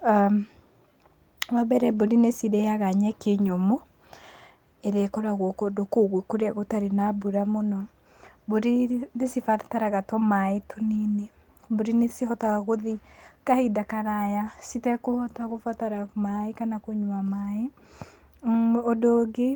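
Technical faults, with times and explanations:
1.97–1.99 s, 3.47–3.49 s, 8.91–8.97 s, 10.93–10.95 s, 15.49–15.59 s, lost packet rebuilt from error correction: dropped packets were replaced by low-bitrate copies carried in the following packets, so there is no gap, just brief rough, noisy patches of 20 to 60 ms.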